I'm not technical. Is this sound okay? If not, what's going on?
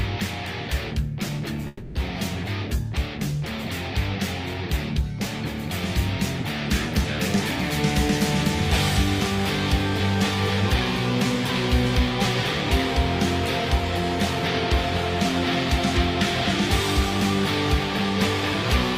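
No. From about 1.67 to 1.98 s there is a long network dropout, most likely from the connection briefly stalling. The last sound smears into a fading buzz for roughly 0.3 s, and that stretch of audio is simply gone, not delayed, unlike a brief click-sized glitch.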